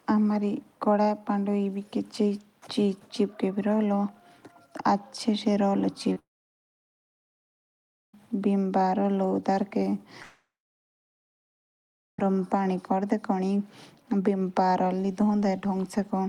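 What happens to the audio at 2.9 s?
Nothing goes wrong at 2.9 s; the speech runs on intact through that moment.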